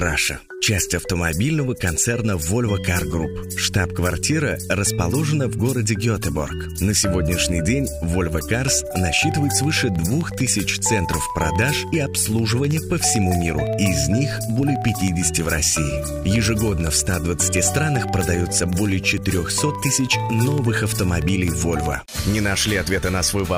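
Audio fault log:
8.29 to 23.53 s: periodic USB or driver dropouts. Every 0.064 s a tiny slice of audio, a fraction of a millisecond, is blanked to silence as something blocks the audio path. The result is a steady train of ticks, around two hundred, audible only where signal is present.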